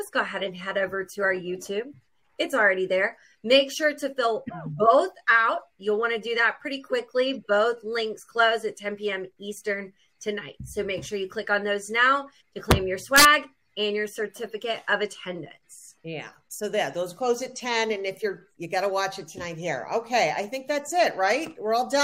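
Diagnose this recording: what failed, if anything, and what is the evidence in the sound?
Integer overflow in the fixed-point gain or sample-format conversion stage produces two violent cracks, a single one at 12.71 s and a longer burst from 13.16 to 13.25 s. The loudest peaks were pushed about 2 dB and about 3 dB past full scale, and instead of being limited they wrapped to the opposite sign. On the waveform, peaks leap from the top rail straight to the bottom. On a spectrogram, they show as bright broadband vertical streaks.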